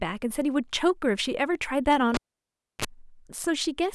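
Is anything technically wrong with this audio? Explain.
Yes. From 2.14 to 2.85 s the speech drops out with a sharp pop, sits in near silence for about 655 ms, then a brief 50 Hz hum burst of roughly 34 ms precedes a second pop as the speech returns. This is a cable pulled and plugged in while live: unplugging breaks the signal path abruptly, and on reinsertion the plug's tip touches first, so the ungrounded input picks up mains buzz until the connector seats fully.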